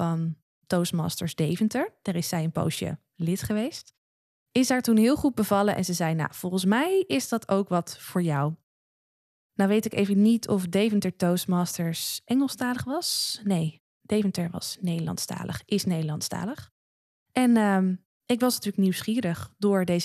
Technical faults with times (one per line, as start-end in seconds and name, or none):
none